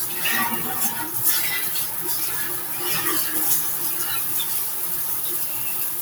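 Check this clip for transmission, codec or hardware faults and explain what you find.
A noise suppressor applied to music or sounds runs through the whole clip. Built for speech, it treats sustained tones, ambience and reverberant tails as background noise and pulls them down, while sharp onsets pass. Held sounds and decays sink by a swing of around 5 dB, so the audio pumps and thins. Unlike automatic gain control, which rides overall level, this tracks the steadiness of each sound, leaving attacks intact while tails sink.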